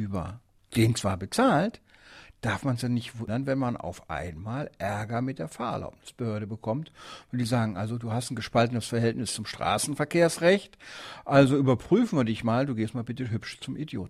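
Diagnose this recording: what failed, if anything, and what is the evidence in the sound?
No fault found anywhere.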